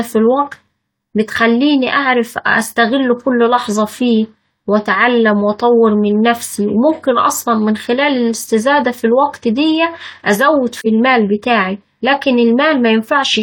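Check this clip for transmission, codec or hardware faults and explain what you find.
One transmission fault is present. From 10.81 to 10.87 s there is AAC frame loss with muting. The decoder zeroed the missing spectrum, and the overlapping windows faded the sound out and back in. The result is a soft-edged gap of about 43 ms, consistent with a single lost frame.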